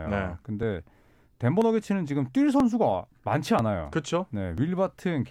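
At 0.63, 1.62, 2.60, 3.59 and 4.58 s the speech jumps forward a touch, about once a second, each time losing a sliver of roughly 15 ms with the two sides butted together. That pattern is likely audio missing between chunks, dropped as one block closes and the next opens.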